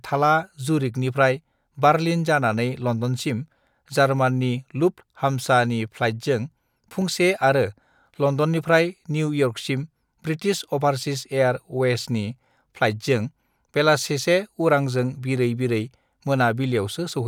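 Speech with one repeated buffer fault at 7.01 s: a roughly 5 ms piece plays twice with hard joins, heard as a click or brief buzz, which fits a small playback buffer that missed its deadline.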